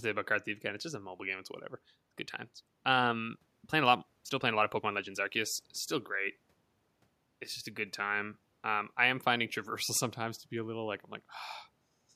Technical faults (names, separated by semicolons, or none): time-stretched section